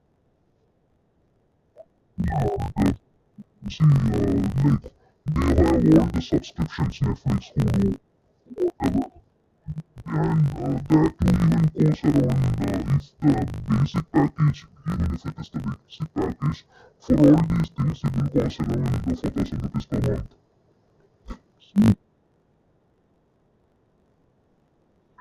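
Throughout, interleaved audio read as planar: 20 ms blocks split into half-speed halves, so the speech sounds an octave low, dull and robotic, buzzing at 50 Hz.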